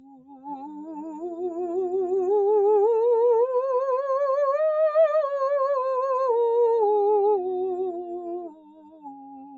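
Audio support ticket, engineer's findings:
Music pumping and thinning across the whole clip. Speech-tuned noise suppressor still active, treating sustained tones and reverb tails as noise. Gain swings of roughly 15 dB, seen as a breathing, uneven envelope in the waveform.

Sound cut by the noise suppressor at 0–1.23 s and 8.44–9.57 s. Held and decaying material pulled down by up to about 19 dB. Waveform shows sunken stretches and clipped-short tails, with the spectrogram fading early between attacks.

Spectrum above 8 kHz empty, from the call path's 8 kHz band limit.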